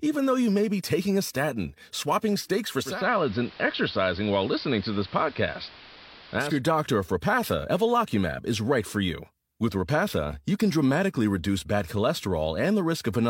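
A speech recording in which, from 2.78 s to 6.63 s, digital radio blending to analogue occurs: the receiver cross-fades over about 0.29 s to the AM broadcast, so the treble is band-limited and hiss sits roughly 20 dB below the speech at unchanged level. Unlike a plain low-pass filter, the hiss arrives with the band-limiting and both leave together.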